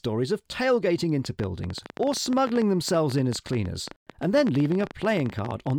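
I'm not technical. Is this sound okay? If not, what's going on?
No. Likely interference from nearby equipment or a faulty connection or power supply is injecting a train of clicks. From just after "of tailgating" at 1.25 s until 5.71 s, around seventy sharp ticks, about 14 a second at an uneven pace, pop over the speech and pauses.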